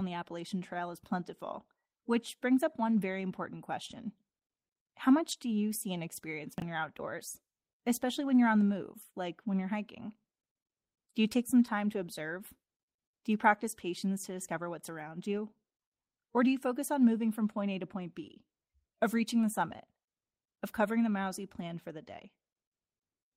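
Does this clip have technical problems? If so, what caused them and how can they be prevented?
Yes. At 5.31 s, just before "do you see and", there's a brief rough, noisy patch. That's a lost packet rebuilt from error correction: one 20 ms packet went missing, and the decoder filled it from the low-bitrate backup copy carried in the next packet, so there's no gap, just a coarser 20 ms stretch. To prevent it, cut packet loss on the network path, or add some jitter-buffer headroom so late packets still arrive in time.

The other issue is chunks out of order, at 6.58 to 6.62 s (between "you see and experience" and "you're outdoors especially when") and again at 16.18 to 16.22 s. In each case one 20 ms chunk landed a chunk late and played after the one meant to follow it. Nothing's lost, but the hard joins give a quick jumbled moment. To prevent it, reorder chunks by sequence number or timestamp before playback or writing.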